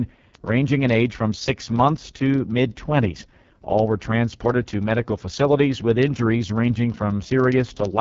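AMR wideband (HD Voice) codec damage runs through the whole speech recording. At 6.6 kbit/s it sounds rough and raspy, with nothing above 7.4 kHz. Word clock ticks run from 0.10 s to 7.98 s, roughly every 0.04 s. An unlocked receiving clock, off by roughly 500 ppm, drops or repeats one sample each time the clocks slip.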